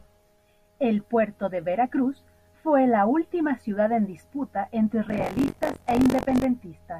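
From 5.08 to 6.45 s, buffer tearing adds a robotic buzz near 46.9 Hz, which fits a 1024-sample buffer. Writer and reader crossed, so roughly a sixth of each buffer replays audio about 40 ms old.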